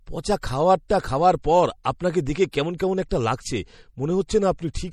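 Throughout the speech, MP3 compression is plainly audible and is the likely cause of a watery, swirling texture, with sibilants turning metallic as weak frequency lines drop in and out between frames. The damage fits a low bitrate near 48 kbps, and nothing sits above 20.7 kHz.

At 2.52 s a pre-echo appears: a short hiss, spread over about 17 ms, runs just ahead of a sharp onset. The block's quantisation noise, sized for the loud attack, has leaked into the quiet moment before it, so the attack sounds softened and smeared.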